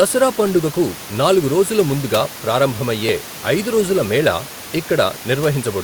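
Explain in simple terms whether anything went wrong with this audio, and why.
Nothing went wrong here.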